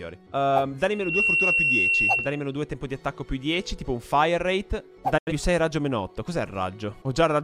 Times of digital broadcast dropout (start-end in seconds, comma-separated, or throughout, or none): 5.18-5.32